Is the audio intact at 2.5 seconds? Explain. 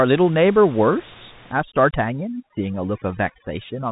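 No. The link is a Bluetooth CVSD headset codec, coding one bit per sample in a coarse up-or-down step, which fits a 64 kbps link. Nothing passes above 3.8 kHz, so at 2.5 s the speech is muffled, sibilants turn scratchy, and a granular hiss sits underneath.

From 1.53 s to the end, including 2.5 s, overdone noise removal is switching individual frequency bands fully down wherever they approach its noise estimate. The room noise, about 23 dB below the speech, drops and breaks up into twinkling specks.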